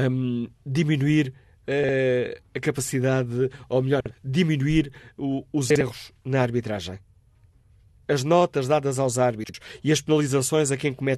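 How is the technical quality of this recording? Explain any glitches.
The recording has four brief glitches, all frames out of order. At 1.84–1.94 s, 4.00–4.11 s, 5.70–5.81 s and 9.44–9.54 s, two adjacent blocks of about 52 ms each were decoded swapped. Each stretch sounds like a garbled flutter. No time is lost.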